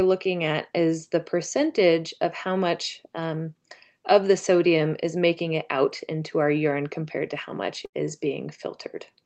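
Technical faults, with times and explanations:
7.85 to 8.05 s, burst of packet loss: Right after "compared to how much", the speech stops moving and the last sound is stretched out and fades for roughly 76 ms before the talker comes back slightly further along. Several packets in a row failed to arrive in time, so the receiver extended and faded what it had already played. About 80 ms of the original speech never plays.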